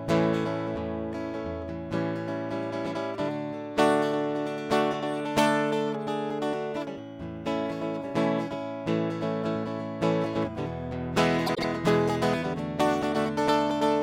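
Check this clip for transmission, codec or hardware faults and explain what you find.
One fault is audible in this music clip: frames out of order, from 11.46 to 11.64 s. Two adjacent blocks of about 78 ms each reached the decoder swapped and were played in that order, which fits runs of about three frames each. For that moment the music jumps forward and then back, giving a brief garbled flutter. No time is lost and nothing is repeated, which tells it apart from a dropout or a stutter.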